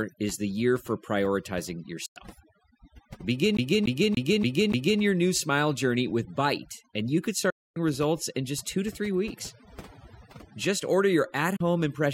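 A speech clip with heavy, overdone noise removal throughout: the background has been pulled down and broken up into twinkling specks, and quieter parts of the voice were suppressed along with it. Digital broadcast dropouts mute the audio three times, each with a quick fade of about 8 ms. The first runs from 2.06 to 2.17 s and loses about 96 ms. The second falls between "and you could" and "results in just two", from 7.50 to 7.77 s, and loses about 256 ms. The third comes between "order your at" and "impression kit", from 11.56 to 11.61 s, and loses about 32 ms. These gaps fit whole lost frames of roughly 32 ms each. From 3.57 to 5.01 s, just before "your new smile journey", a CD stuck on one turn repeats the same 0.29 s segment five times, giving the fast, even stutter of a skipping disc, which points to the laser being thrown back at a scratch.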